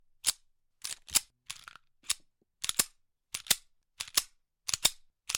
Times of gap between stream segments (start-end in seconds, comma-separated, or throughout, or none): none